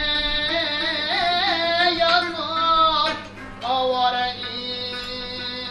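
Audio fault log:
No technical faults can be heard anywhere in the signal.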